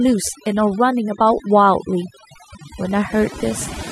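From start to finish the speech carries overdone noise removal. A noise reducer pushed too hard keeps switching individual frequency bands off whenever they sit close to its idea of the noise floor, and the softer parts of the voice get caught with them. The background collapses into near silence dotted with twinkling specks. Unlike a noise gate, which mutes everything at once, this scatters isolated tones across the pauses.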